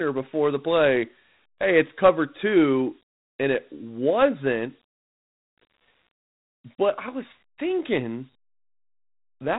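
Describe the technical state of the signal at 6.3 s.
Dialogic VOX ADPCM is present at 6.3 s, as it is across the whole clip. The speech has passed through 4-bit adaptive differential coding, which stores each sample as a small step from a predicted value. The coarse steps leave a plainly audible gritty hiss riding along with the speech. The spectrum stops at about 3.9 kHz, which fits an 8 kHz sample rate and a 32 kbps stream, so the sound is narrow and muffled.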